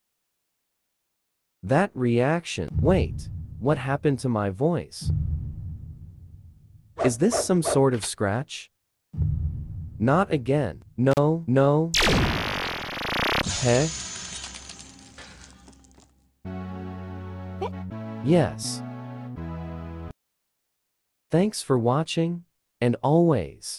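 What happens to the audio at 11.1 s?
There's an intermittent contact from 11.11 to 11.18 s: a loose plug or cable briefly opens, dropping the sound for about 34 ms with crackle at either edge.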